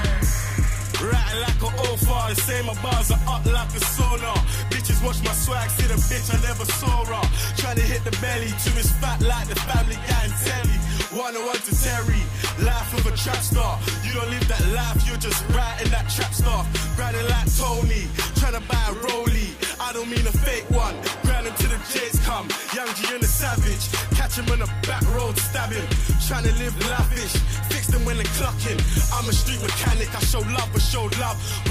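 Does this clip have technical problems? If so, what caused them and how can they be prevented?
Yes. A corrupt frame decoded at 9.65 to 9.71 s gives a short glitch peaking around -15 dBFS. A few damaged compressed frames were played as if valid, so misread codes put energy at the wrong frequencies for about 50 ms. Error detection with checksums and concealment of bad frames, rather than decoding them, would prevent it.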